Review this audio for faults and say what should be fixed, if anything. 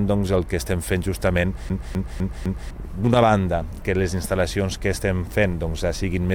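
CD stuck on one turn, from 1.69 to 2.71 s: a quarter-second slice, about 253 ms long, plays four times in a row with a brief mute at each jump. That is the laser being knocked back one track at the same scratch on every revolution. To prevent it, rip from a clean, undamaged disc using secure, error-checking extraction.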